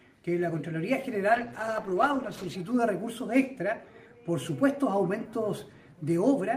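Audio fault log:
1.3–2.63 s, call bitrate drop: the audio turns muffled and watery as the encoder codes coarsely and loses the highs. That fits a drop from about 40 to 12 kbps.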